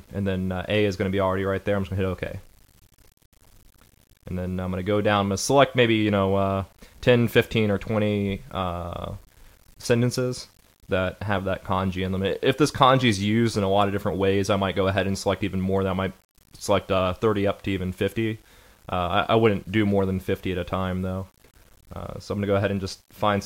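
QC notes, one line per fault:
Throughout: low bit depth without dither. Quiet passages carry a grainy, gritty distortion that rises and falls with the sound, and the faintest moments sputter or drop out to silence instead of trailing off into a steady hiss. The error sits roughly 35 dB below the signal. The likely cause is requantisation to around 9 bits with plain rounding: with no dither to decorrelate the error, it follows the waveform and is heard as distortion rather than as a constant noise floor.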